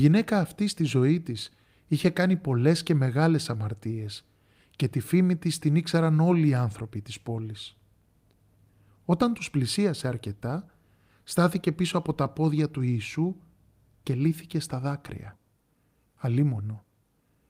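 Listening closely to the speech, nothing stood out as a technical fault at any point.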